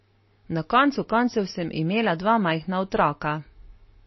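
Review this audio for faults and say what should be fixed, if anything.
Heavy lossy encoding, likely MP3 compression at a starved bitrate of around 25 kbps, runs through the whole speech clip. Short of bits, the encoder discarded everything above 5.8 kHz and dropped weak frequency lines frame by frame, leaving dull, watery, swirling speech with smeared consonants. Encode at a much higher bitrate, or keep a lossless copy for any further processing.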